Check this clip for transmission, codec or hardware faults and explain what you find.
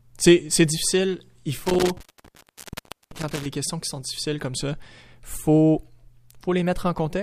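There is one hardware fault in this speech clip: an intermittent contact between 1.66 and 3.46 s. A loose connection opens for about 1.1 s, cutting the sound. Crackle at both edges and a faint hiss underneath, rather than clean digital silence, distinguish it from a packet-loss dropout.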